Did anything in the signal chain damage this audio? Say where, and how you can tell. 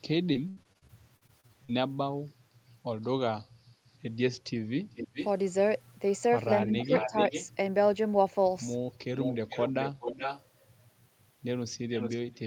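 Yes. On the network, repeated packet loss (robotic sound) from 0.33 to 1.71 s: about a dozen holes, longest 79 ms, patched by stretching prior sound, giving choppy speech with pieces missing.

In call processing, a likely echo leak from an incompletely cancelled far-end loudspeaker returns a delayed copy about 424 ms late and about 10 dB down at 4.95–5.28, 6.79–7.48, 9.15–10.44 and 11.90–12.17 s.

Also in call processing, speech suppressed in double talk, likely from the echo canceller clamping both sides, dips the talker by about 10 dB for roughly a third of a second between 6.64 and 7.14 s.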